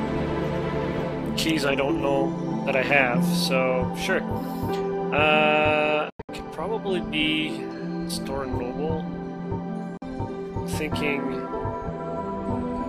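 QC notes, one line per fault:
6.10–6.29 s, Bluetooth dropout: the sound breaks up into several short silences over about 0.19 s, the longest near 93 ms. About 163 ms goes missing in all. The sound comes back further along, with the missing part skipped rather than delayed.
9.97–10.02 s, Bluetooth dropout: about 46 ms of silence, then the sound resumes as if it had kept playing. Packets that likely arrived too late at the headphones were discarded.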